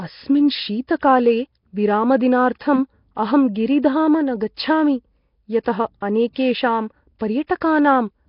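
Nellymoser compression, throughout the speech: the rough, hissy halo and smeared, underwater character, with nothing above 5.3 kHz, are likely the Flash-era Nellymoser Asao codec at a bitrate that fits about 22 kbps. Weak bands starved of bits are refilled with noise, causing heavy damage.

Pre-echo at 7.19 s and again from 7.47 to 7.49 s: the codec spreads quantisation noise across each block, so noise sized for a sharp attack leaks into the quiet moment before it. A hiss runs about 16 ms, then 25 ms, ahead of each onset, softening it.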